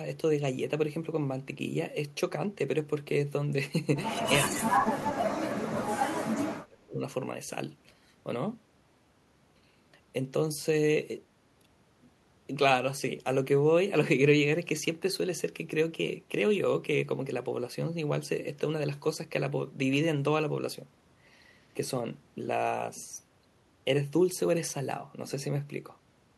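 Speech that drops away sharply from 4.44 to 4.73 s and again from 4.96 to 7.01 s, sinking by roughly 25 to 30 dB. This is speech suppressed in double talk, likely from an echo canceller that could not tell this talker from loudspeaker echo while both sides spoke, and so attenuated both.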